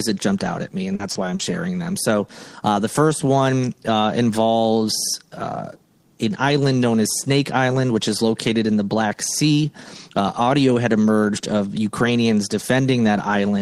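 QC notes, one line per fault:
0.95–1.02 s, 1.11–1.18 s, 1.35–1.42 s: short concealed packet loss, three times, 40 ms missing each time. The receiver extended the preceding sound, by pitch or as shaped noise, then crossfaded back, causing brief smears. On a spectrogram, each gap shows smoothed, repeated texture instead of natural detail.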